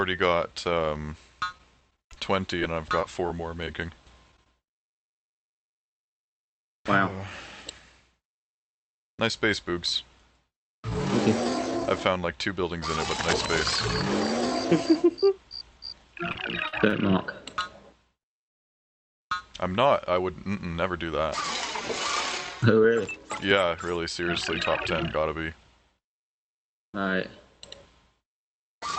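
Between 1.52 and 4.47 s the audio is broken by roughly twenty tiny ticks and smears, each at most about 20 ms, covering about 0.2 s in all. These are scattered short gaps, where lost or late packets were individually patched by extending the preceding sound. From 16.32 to 16.93 s the audio hitches three times, with 106 ms filled in and the longest hold at 49 ms. This repeated stall, or stutter, comes from the jitter buffer running dry over and over and the receiver stretching the last sound until packets caught up, so nothing is lost. At 18.49 s the audio drops to silence for 0.73 s, then resumes exactly where it stopped. This call audio freeze likely comes from packets being held up in transit, emptying the jitter buffer and adding 730 ms of delay. Later comes jitter buffer speed-up. From 20.55 to 21.29 s the audio runs at 113% speed with unchanged pitch, removing about 0.1 s. From 22.66 to 28.78 s it runs at 104%, removing about 0.3 s. 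Both come from the receiver repeatedly cutting out short pitch-period chunks to reduce the backlog. Throughout, the high end stops around 8 kHz with the usual coding texture of the call codec, consistent with Opus at roughly 64 kbps.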